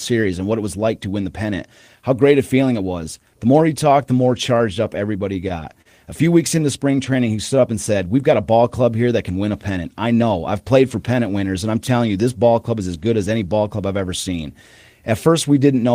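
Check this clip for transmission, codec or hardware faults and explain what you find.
Three transmission faults appear, all from packet delivery on a network voice link.

Scattered short gaps, 4.47 to 5.87 s, after "he talked the more": about seven lost packets, none longer than about 40 ms, each patched by extending the prior sound. These cause brief ticks and smears, not a sustained tempo change.

Jitter buffer slow-down, 6.24 to 7.11 s: the receiver repeated pitch periods, adding 54 ms and playing at 95% speed. The speech drags at an unchanged pitch, unlike tape-style slowing, which would lower the pitch.

Jitter buffer speed-up, 9.70 to 10.23 s, between "that can win a" and "I've played for pennant": the receiver trimmed about 70 ms of pitch periods, playing at 111% speed. The speech sounds hurried at the same pitch, with no audible dropouts.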